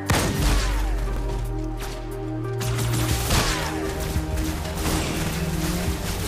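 At 1.17 to 1.22 s and again at 5.27 to 5.32 s the sound stutters briefly: overlapping chunks. The audio was handled in 2-second chunks, and each new chunk began 50 ms before the previous one finished, so that 50 ms stretch plays twice at the join. Unlike a dropout, nothing goes missing and no silence appears. The material repeats, and that short echo-like hiccup sets it apart.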